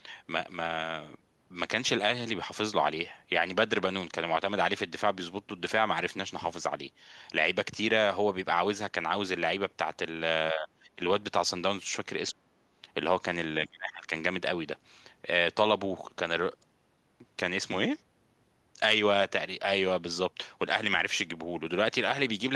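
The speech drops away three times. From 10.52 to 11.0 s it sinks by about 20 dB. From 12.31 to 12.5 s it nearly vanishes, falling by about 30 dB. From 13.68 to 14.11 s it dips by about 25 dB. Each dip sounds like the voice being briefly turned down. This is likely speech suppressed in double talk. An echo canceller mistook the talker for loudspeaker echo while the far side spoke, and turned both down.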